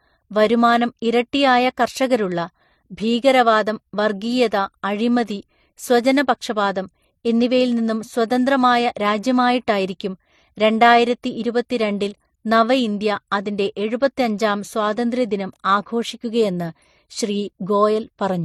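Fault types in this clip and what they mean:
Transcoding between lossy codecs: the speech has two kinds of damage stacked together, a swirly smear in the highs and a dull top end that never comes back. That sound points to a low-rate MP3 around 40 kbit/s, likely re-encoded to HE-AAC near 48 kbit/s.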